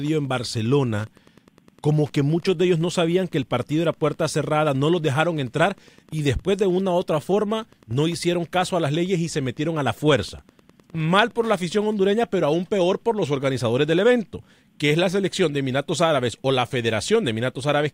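From 0.0 s to 12.56 s, just before "peor por los organizadores", the speech carries Wi-Fi interference. A nearby Wi-Fi radio's beacon, sent every 102.4 ms, is rectified by the audio circuit and heard as a steady, faint ticking about ten times a second, well below the speech. On a spectrogram this appears as thin vertical broadband lines evenly spaced about 0.1 s apart. The waveform shows small regular spikes in the gaps between phrases.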